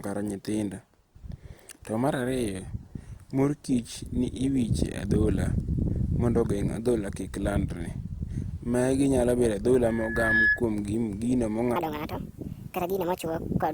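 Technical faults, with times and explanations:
9.84–10.63 s, loudspeaker feedback squeal: the microphone picked up its own loudspeaker, and a 1.7 kHz tone swelled over about half a second to sit roughly 5 dB above the speech.
11.76–13.73 s, section at the wrong speed: this stretch was likely played against the wrong clock, running 1.56 times too fast, so the speech sounds hurried and about seven semitones higher.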